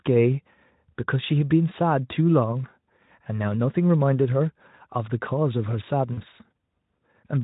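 Speech clip with one real glitch: VoIP packet loss concealed by the speech codec, from about 6.13 to 6.22 s. Roughly 40 ms of audio went missing, which fits two dropped 20 ms frames. The decoder papered over it by repeating its last pitch and filter shape at falling gain, so you get a short stretched stretch of buzzy tone or coloured noise. The voice then takes a beat to firm up again. The Speex coding itself leaves at most faint traces.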